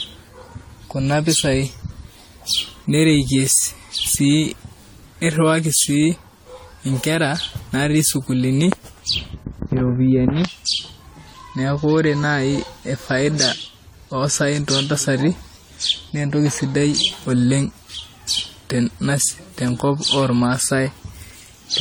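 Throughout, the speech has generation loss: swirly, hollow and smeared, with blurred attacks, likely from about seven successive AAC-LC encodes at 64 kbit/s.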